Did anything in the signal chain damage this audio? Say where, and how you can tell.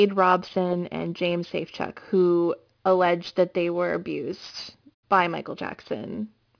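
Yes. The damage happens at sample-rate conversion, and it is aliasing that runs through the whole clip. The audio was resampled from a much higher rate without an anti-aliasing filter. The fold point sits at 5.5 kHz, which fits a target rate of around 11 kHz. Energy that lay above that point mirrored back down into the band at unrelated frequencies. This speech picks up gritty, metallic sibilants, with spurious content about 25 dB below the signal, and the spectrum runs hard right up to the 5.5 kHz edge.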